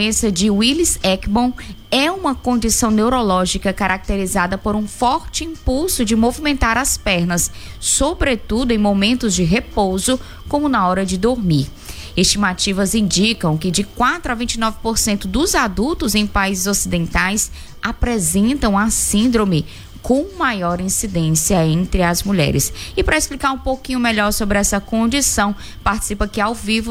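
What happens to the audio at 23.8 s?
Nothing goes wrong at 23.8 s; the audio is intact at that moment, with no dropout, click, distortion or other fault.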